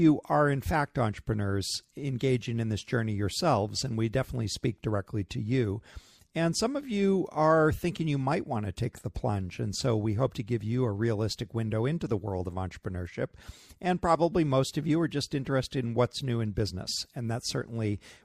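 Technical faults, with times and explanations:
Nothing technical stands out here; the speech carries along without any glitches worth flagging.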